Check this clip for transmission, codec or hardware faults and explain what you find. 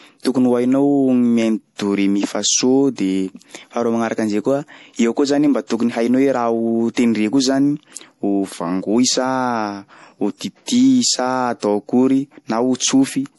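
One codec fault runs through the whole clip. The speech sounds watery and swirly, with chirpy s sounds, likely MP3 compression at a low bitrate near 48 kbps: weak frequency lines flicker between frames. Plain filtering would dull the treble without this swirl.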